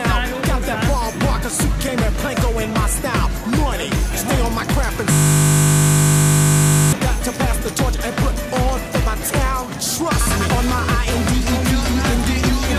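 At 5.12 s the audio locks into a system hang loop and stays stuck until 6.93 s. The computer or driver stalled, but the sound hardware kept replaying the same 20 ms chunk of its ring buffer, about 90 times over. Because the looped piece is so short, it comes across as a steady buzz at 50 Hz rather than a stutter. Then normal sound picks up again once the system recovers.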